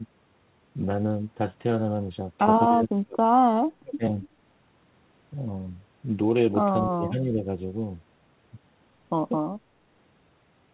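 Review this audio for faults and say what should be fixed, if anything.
Speech suppressed in double talk at 2.68–3.37 s, 3.77–4.03 s and 6.90–7.37 s. The speech drops by about 30–35 dB, and by about 15 dB at 6.9 s, likely from an echo canceller ducking during overlap. The waveform shows abrupt envelope troughs.

Echo leak at 4.19–4.28 s. A faint copy of the speech arrives 239 ms late, about 25 dB below it, as a weak repeated formant pattern on the spectrogram, band-limited below 4 kHz like the G.711 audio.

To prevent both, tune the echo canceller's double-talk detection and residual echo suppression, or have the far end use a headset instead of a loudspeaker.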